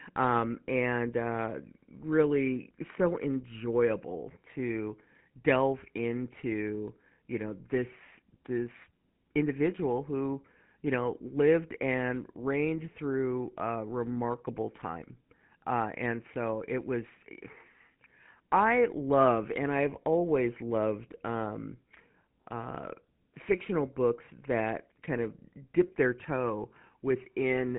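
Speech with the GSM full-rate codec throughout. Nothing passes above 3.9 kHz. The pulse-driven excitation gives a plainly audible buzzy, gravelly roughness, consistent with 13 kbps.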